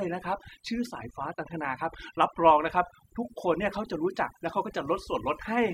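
From start to finish the speech carries overdone noise removal: the denoiser was pushed so hard it gates out any band near its noise estimate, quiet speech detail included. So the background drops and breaks up into twinkly specks.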